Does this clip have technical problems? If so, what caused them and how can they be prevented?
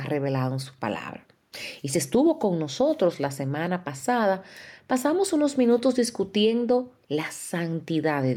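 Yes. There is gain pumping across the whole speech clip. The likely cause is input gain set far too high for the microphone, with a fast limiter or compressor hauling the level down each time the talker gets loud. The level swings by around 5 dB, ducking under every loud syllable. Loud and quiet passages end up squeezed together, so the speech sounds flattened and breathing. To prevent it, set the microphone gain so peaks sit well below the limiter threshold, and use gentler, slower compression if any is needed.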